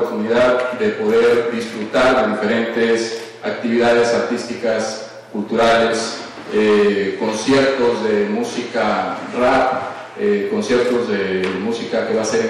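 From start to finish, the signal is driven roughly 12 dB beyond what one stage in the chain can pass, so hard clipping cuts every peak that crosses the ceiling flat. Something like 7 percent of the samples end up pinned at the limit. Those squared-off tops generate strong harmonics high in the spectrum, and on this clip they come through as a harsh, buzzing fuzz on every loud moment rather than occasional crackle.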